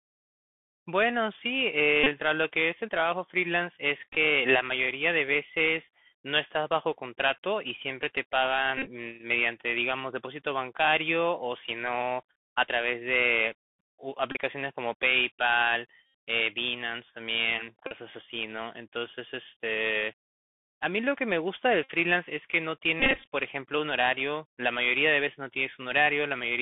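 The speech runs through the Bluetooth CVSD headset codec for the whole clip. Its one-bit delta coding caps the band at about 3.4 kHz, so the audio sounds plainly narrow and muffled, s sounds are scratchy, loud bright moments distort, and a granular hiss sits underneath.

Bluetooth headset packet repeated faults occur at 2.04, 4.13, 8.78, 14.32, 16.06, 17.87, 21.84 and 23.00 s. Each time, lost packets are replaced by the previous packet's bits decoded again. This leaves short buzzy stutters near 267 Hz. The longest, at 8.78 s and 23.00 s, run about 100 ms and 250 ms.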